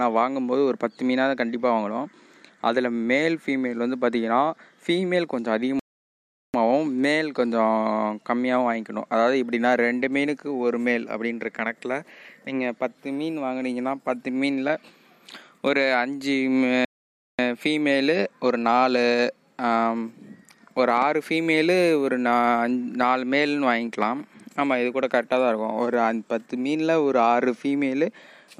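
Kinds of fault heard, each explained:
Playback stall: the sound breaks off in mid-flow and goes silent for about 0.75 s at 5.79 s, then for about 0.54 s at 16.85 s, before carrying on. The player likely ran short of data or had its thread blocked until recovering.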